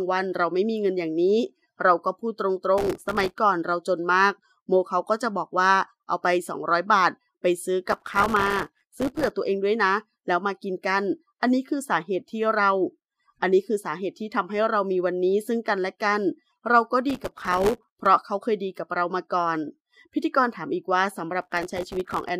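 Processor overload crackle appears at 2.78–3.38 s, 7.89–9.30 s, 17.10–18.06 s and 21.41–22.29 s. Roughly 100 to 200 very short buffers, around 1.5 ms each, miss their deadlines and drop to silence, so each burst is a gritty, tearing crackle that stops once the load eases.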